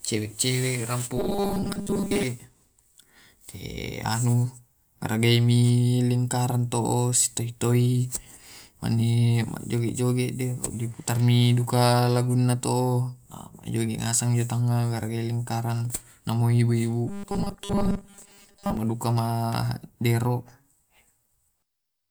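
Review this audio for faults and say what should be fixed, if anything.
Robotic sound from repeated short buffers appears twice in this speech, from 1.17 to 2.23 s and from 17.08 to 18.77 s. Both stretches carry a rigid, metallic buzz at 200 Hz that still roughly follows the speech. The likely cause is audio arriving too slowly, so the playback side loops a 5 ms fragment, whose repetition rate sets the 200 Hz pitch, for most of each stretch while real audio is lost. Larger jitter buffering, or a concealment method that fades rather than loops, would prevent it.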